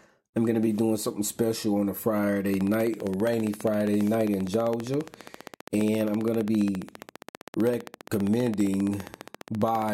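From 2.54 s to 9.90 s a train of clicks ticks at a regular 15 per second, about a hundred pulses roughly 10 dB above the speech and audible in the pauses. The likely cause is interference from nearby equipment, or a faulty connection or power supply.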